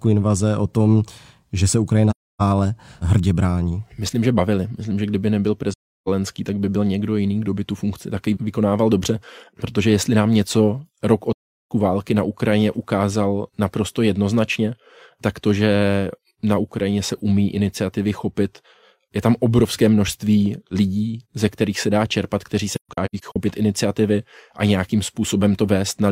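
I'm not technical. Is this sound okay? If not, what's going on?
No. The speech drops briefly to silence, fading softly out and back in, at 2.10–2.42, 5.73–6.08 and 11.33–11.71 s, and in several short gaps between 22.75 and 23.36 s. This is AAC frame loss with muting: chunks of compressed audio went missing and the player replaced them with silence.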